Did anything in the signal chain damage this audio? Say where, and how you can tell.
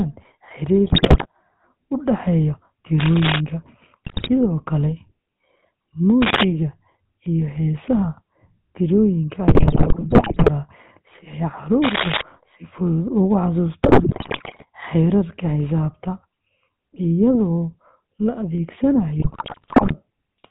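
Yes. The codec stage damaged the speech throughout. It has the buzzy, gravelly roughness of GSM full-rate coding, with nothing above 4 kHz. That points to the original 13 kbps GSM codec, which rebuilds the voice from a vocal-tract filter driven by a sparse pulse excitation. Plain band-limiting would sound muffled but smooth. This roughness sits in the excitation itself, so it is a codec artefact rather than a filter.

The network link also corrupted the coded speech in five bursts: 0.86 to 1.27 s, 4.04 to 4.31 s, 9.48 to 10.49 s (ending just before "si ay"), 13.83 to 14.65 s and 19.18 to 19.95 s. These are GSM bit errors. Flipped bits reach the decoder, which then rebuilds frames from wrong filter, pitch and gain values, and the speech breaks into squawks, pops and gargling. A packet-loss gap would drop out or repeat the sound. These frames are decoded, just wrongly.

The analogue wiring stage is the likely source of three bursts of dense, uneven scratching: 2.99 to 3.41 s, 6.22 to 6.43 s and 11.83 to 12.22 s (just after "si ay"). 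This is cable scratch noise from a worn cable, connector or control, whose contact resistance jumps as it moves. The bursts are about as loud as the speech or a little louder. They lie on top of the voice as added rustle, while the speech underneath stays intact, which is what separates them from bit-error squawks.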